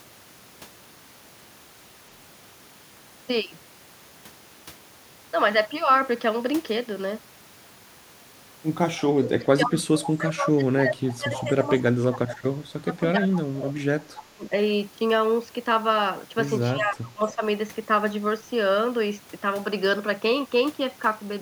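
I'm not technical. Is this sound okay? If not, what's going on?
No, there are two problems. First, echo leak: faint, short copies of the speech come back about 0.3 seconds late at 8.98–9.02, 11.37–11.44 and 14.18–14.24, likely from a loudspeaker's echo slipping past cancellation. Second, speech suppressed in double talk: the talker's voice sinks deeply or drops out at 9.18–12.64, 12.81–13.76, 14.08–14.52 and 16.71–17.41, likely because both sides were talking over each other.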